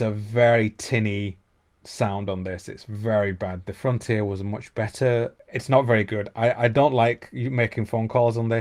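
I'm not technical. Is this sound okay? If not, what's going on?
Yes, nothing wrong can be heard in this recording.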